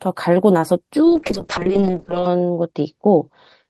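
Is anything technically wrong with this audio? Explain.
Yes. From 1.06 s to the end of the clip there is a call bitrate drop. The connection's bandwidth estimate fell, so the encoder was pushed from 32 kbps to just 6 kbps and held at that floor for about 1.2 s. With so few bits, the speech is quantised much more coarsely and the coded bandwidth narrows from 20 kHz to 8 kHz. The voice turns rough and watery, loses its upper sibilance and airiness, and sounds muffled through to the end.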